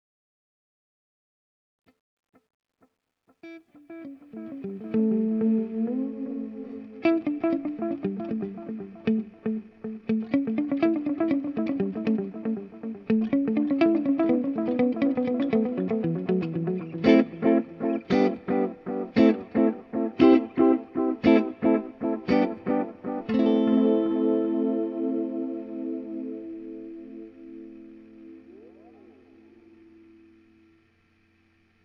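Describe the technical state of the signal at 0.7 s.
At 0.7 s you're in the worst stretch of truncation distortion on the fade-in, which runs from the start to about 5.04 s. The gain stage keeps only about 12 bits with no dither, so the quiet signal collapses into coarse steps and sounds gritty.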